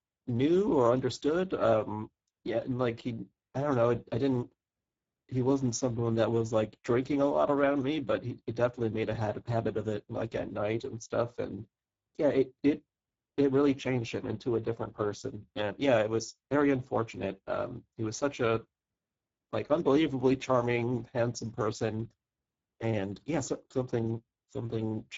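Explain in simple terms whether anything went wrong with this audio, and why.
The speech was squeezed through the Speex codec, an older voice-chat compressor, throughout, leaving it rough and hoarse with nothing above 7.7 kHz.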